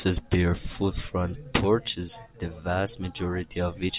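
Nothing stood out as a technical fault on listening to this speech recording.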